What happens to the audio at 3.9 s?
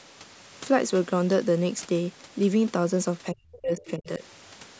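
The speech drops away sharply here, falling by something like 35 dB at its deepest across 3.31 to 4.23 s, with roughly 0.7 s of it affected. This is speech suppressed in double talk. The likely cause is that both ends of the call were talking at once and the echo canceller, unable to tell this talker apart from the loudspeaker echo, turned everything down together.

Right around 3.9 s, during that dip, a faint second voice also slips through, from 3.78 to 3.91 s. It is a short scrap sitting about 20 dB below the main speech. This is the other side's voice leaking through, likely because the far end was playing over the device's loudspeaker and the echo canceller left a residue of it in the microphone signal.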